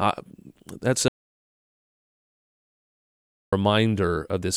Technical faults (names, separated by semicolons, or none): audio dropout to silence